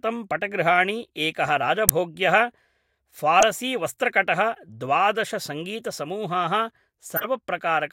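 Bits in the compressed stream were flipped and the decoder played the damaged frames anyway, a corrupt frame decoded each time, so misread gains and codes put energy at the wrong frequencies. At 1.88 s, right after "पटगृहाणि एकः", a near full-scale blip cuts in. A loud squeak follows at 3.40–3.43 s, then a faint chirp around 4.54–4.59 s, well down at about -35 dBFS. At 7.16–7.27 s comes a stronger burst of noise, peaking at about -10 dBFS.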